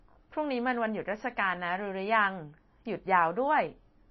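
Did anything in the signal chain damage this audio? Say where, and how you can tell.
Yes, at the codec stage, likely MP3 compression at a low bitrate. Throughout the speech nothing survives above 5.8 kHz, and the damage is plainly audible: a watery, swirling texture as weak frequency lines flicker between frames, which points to roughly 24 kbps.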